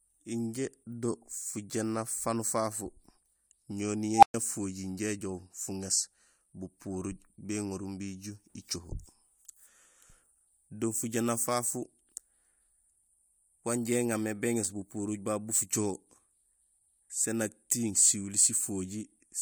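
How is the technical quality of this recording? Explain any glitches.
The recording has one clear glitch, an unstable filter fault from 4.15 to 4.34 s. A recursive filter's feedback ran away, so a tone near 700 Hz swells over 74 ms into a loud squeal. The output then cuts out for 115 ms until the filter resets. On a spectrogram this appears as a brightening horizontal line followed by a blank gap. On the waveform it looks like a ballooning envelope that then drops away.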